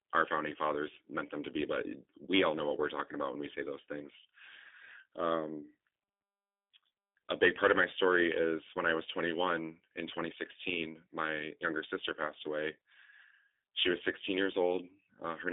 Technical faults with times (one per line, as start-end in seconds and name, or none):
0.00-15.53 G.729 codec